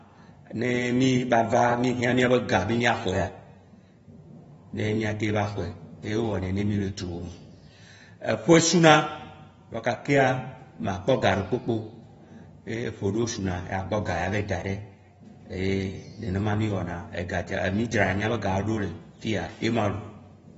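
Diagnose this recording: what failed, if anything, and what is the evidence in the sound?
Codec stage: throughout, the speech stops at 7.6 kHz and smears and warbles, likely AAC compression whose low bitrate, near 24 kbps, cut the bandwidth.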